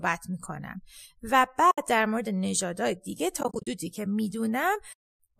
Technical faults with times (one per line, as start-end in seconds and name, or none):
1.71-1.78 AAC frame loss with muting
3.40-3.67 AAC frame loss with muting
4.92-5.19 AAC frame loss with muting